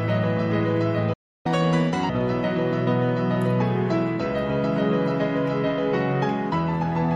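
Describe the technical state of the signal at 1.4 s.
A playback stall runs from 1.13 to 1.46 s, likely because the player ran out of data or its thread was blocked, so the output goes silent for about 0.3 s mid-flow. From 1.46 to 2.09 s the player plays its backlog with catch-up at higher speed, resampling to 1.5 times normal, so the sound runs fast and rises roughly seven semitones before settling back.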